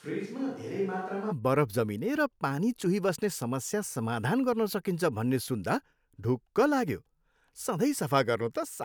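From the start to 1.30 s the speech is roomy, hollow and thin, a few decibels quieter, with faint room noise underneath, then snaps to a close sound. That's likely a switch to a distant microphone while the close mic's feed was missing.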